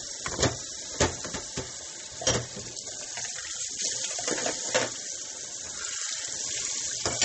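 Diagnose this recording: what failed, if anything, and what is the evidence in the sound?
The failure sits at the codec stage and is most likely heavy MP3 compression, audible from start to finish. Nothing survives above 8.4 kHz, and the remaining band has a watery, swirling texture with smeared attacks, damage that fits a low bitrate of about 32 kbps. When bits are scarce, the encoder trims the treble at a fixed point and drops weak frequency lines frame by frame. A spectrogram would show a flat ceiling at 8.4 kHz with flickering holes below it.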